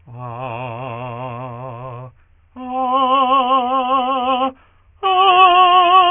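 Aliasing runs through the whole music clip. The sample rate was cut without a filter first, which fits a drop to 6 kHz. Content above 3 kHz folds back to false pitches, fairly strong, about 10 dB under the music. Bright parts sound gritty and metallic.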